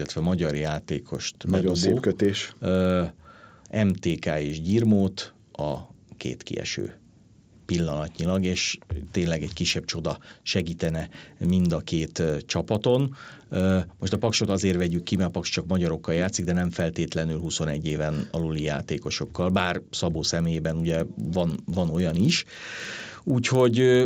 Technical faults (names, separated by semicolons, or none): resampler restarted on every block